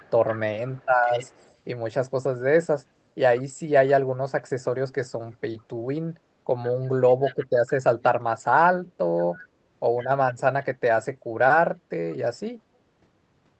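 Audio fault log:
0.0–1.53 s, 7.24–7.71 s and 9.98–10.08 s, echo leak: a faint delayed copy of the speech trails the original by about 152 ms, sitting roughly 20 dB below it, and a little quieter in the last, brief scrap. The likely cause is a far end playing the call on a loudspeaker whose echo canceller let part of the microphone pickup through, so that residue returns as a delayed copy of the voice, under speech already limited to 8 kHz by the call codec.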